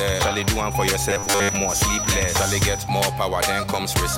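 Feedback whistle, 0.0 to 2.91 s: a thin, steady 5.9 kHz tone sits behind the sound, around 10 dB below it, swelling and fading slowly in level. The likely cause is a loudspeaker-to-microphone loop held right at the edge of feedback, sustaining that one frequency without building up.

Robotic sound from repeated short buffers, 1.1 to 1.49 s: the sound turns into a rigid, metallic buzz at 100 Hz while still loosely tracking its shape. It likely comes from audio arriving too late, with the last few milliseconds replayed to fill the gaps. Most of that stretch is repeats, and the buzz fits a 10 ms buffer.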